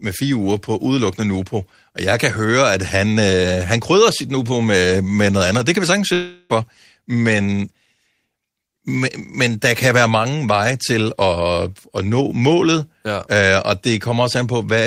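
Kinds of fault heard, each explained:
Long network dropout: At 6.13 s the speech breaks off until 6.52 s. The last sound is drawn out as a fading buzz that fills the whole gap, with no silence. A likely stall in packet delivery lost about 0.36 s, which never returns.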